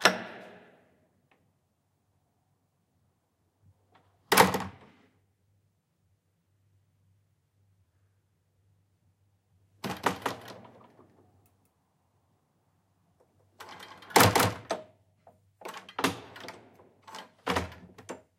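From 10.02 s to 14.64 s the sound is doubled. A second, full-band copy trails the first by about a fifth of a second. It sits roughly 5 dB below the original. This is a doubled audio track. The likely cause is the same signal reaching the mix twice, once through a slower path. The copy has no decay and no room colour. It starts and stops abruptly, so every event lands twice, like a hard slapback.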